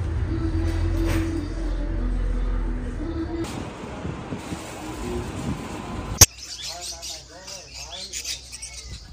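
A sharp, loud squeaky burst from 6.15 to 6.27 s is a corrupt frame decoded: a handful of damaged compressed frames were played anyway, scattering energy across wrong frequencies.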